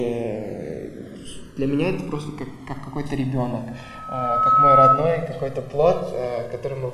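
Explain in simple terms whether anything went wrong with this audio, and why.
Two problems can be heard. Throughout, the channels drift apart: the left and right sides were recorded on devices whose clocks disagree slightly, so one side slowly falls behind, ending up about two thousandths of a second late. When mixed together, this produces a slow, swirling flanging effect.

From 3.56 s to 5.07 s there is a loudspeaker feedback squeal. A microphone picked up its own loudspeaker, and a tone at 1.3 kHz kept feeding itself, swelling over roughly a second into a piercing squeal that stands well above the rest of the sound.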